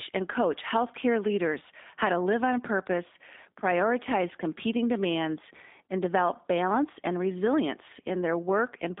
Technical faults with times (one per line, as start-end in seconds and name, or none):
0.00-9.00 G.729 codec